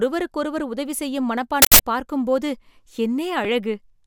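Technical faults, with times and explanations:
1.62–1.79 s, uninitialised buffer: Right after "உதவி செய்யும்" a loud burst of harsh digital noise lasts about 0.17 s, which fits an 8192-sample block. Playback used that buffer before any audio was written to it, so stale memory contents came out as samples.
3.44 s, damaged data in a compressed stream: A very brief chirp or blip cuts into the speech. Corrupted bytes in the encoded stream made the decoder misread the frame there and lose sync, so it produced a few milliseconds of garbage while searching for the next valid frame header.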